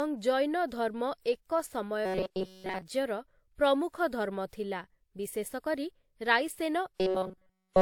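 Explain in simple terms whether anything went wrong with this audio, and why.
Two things went wrong. The audio was likely passed through one lossy codec, HE-AAC, and then re-encoded with another, WMA. That is transcoding between lossy codecs. Each squeeze adds its own smearing on top of the last, and nothing above 18.4 kHz survives, so the sound is slightly dull and grainy throughout.

Separately, new audio likely arrived too slowly, so the player kept repeating a tiny slice, roughly 5 ms long, instead of waiting. That is robotic sound from repeated short buffers. It turns the speech into a flat metallic buzz at 188 Hz from 2.06 to 2.82 s, where most of the sound is affected, and again from 6.96 s to the end, where essentially all of it is.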